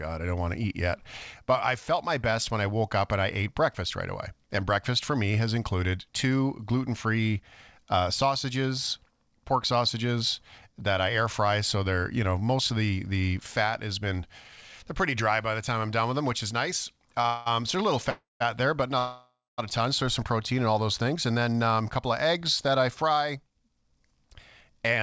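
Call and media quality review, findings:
Short stall from a late packet at 17.22 to 17.26 s, right after "them which is nice". Last sound held about 25 ms too long, with a slight buzz or dip. Jitter buffer ran dry waiting for one packet. Playback resumed at the same point, so nothing was lost and delay grew by 25 ms.

Call audio freeze, three events. At 17.26 to 17.48 s, straight after that stall, a fading buzz or hiss fills 194 ms with no silence. Likely packets held up in transit and the jitter buffer empty. At 18.10 to 18.42 s, 305 ms of fill, 160 ms of it silent, ending before "there but". At 18.98 to 19.60 s, 595 ms of fill with 200 ms of silence. Each resumes where it stopped. No content lost, only added delay.

Jitter buffer speed-up at 22.68 to 24.27 s. Sound runs about 7% fast at unchanged pitch and comes across as hurried. The buffer was holding more audio than its target. The receiver trimmed pitch-period slices back to back, roughly a tenth of a second in total, to reduce latency. 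The G.722 wideband path shows no content above 8 kHz throughout.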